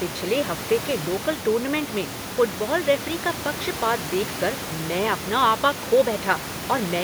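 No technical faults are audible.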